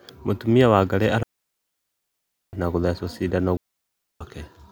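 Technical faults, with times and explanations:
1.23–2.53 s and 3.57–4.21 s, digital wireless dropout: the receiver loses the link and mutes for 1.3 s and 0.64 s, leaving clean near-silent holes with no noise bursts at their edges.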